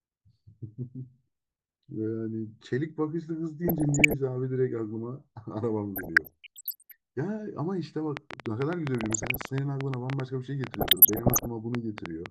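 The speech picks up DAB burbling from 3.68 to 4.14 s and again from 5.96 to 6.92 s, a bubbling, squelchy churn as corrupted MP2 data makes individual sub-bands jump in level frame by frame. On a spectrogram it appears as scattered bright, blocky patches in isolated frequency bands. The bit error rate is under one percent.

From 8.17 to 12.27 s a train of clicks ticks over everything at about 8 per second, unevenly spaced, around thirty in all and peaking about 20 dB above the signal. The waveform shows tall, near-identical spikes, which form thin vertical lines on a spectrogram. The likely cause is interference or a faulty connection or power supply.

DAB burbling returns within the clicks at 8.98–9.49 s and 10.69–11.48 s, the latter denser at about one percent bit errors.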